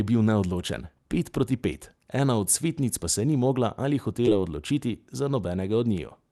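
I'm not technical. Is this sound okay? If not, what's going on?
No. There is a short concealed packet loss at 4.25 to 4.29 s, between "se ni mogla ali" and "odločiti za". A tiny piece of the call arrived too late, so the receiving phone or app stretched the preceding sound to cover the gap, then blended back into the real audio. You hear it as a brief smear or wobble.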